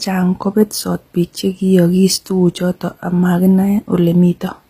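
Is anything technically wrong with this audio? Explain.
Yes. Throughout, the speech has a gritty, metallic treble and lispy s sounds, with nothing above 15.5 kHz. This is likely HE-AAC compression at a low bitrate, consistent with about 24 kbps. The upper band is rebuilt by copying lower bands upward, so its harmonics don't align. On a spectrogram, the treble looks smeared and repeated, ending at a flat cutoff.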